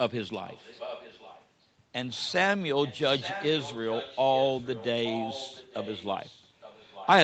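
From 0.46 to 1.48 s, 2.84 to 4.87 s and 5.04 to 7.07 s there's an echo leak: a faint copy of the speech trailing by 0.87 s, louder in the last stretch. It's likely an echo canceller missing loudspeaker pickup.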